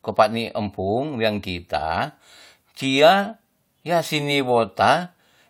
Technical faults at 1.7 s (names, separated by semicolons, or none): none